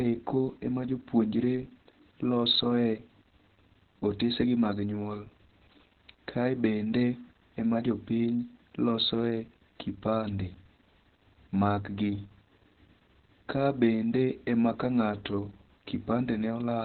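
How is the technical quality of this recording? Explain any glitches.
Technical quality is poor: heavy Opus voice compression throughout. The band stops at about 4.3 kHz, consistent with narrowband SILK near 8 kbps, so speech sounds muffled, hoarse and slightly robotic.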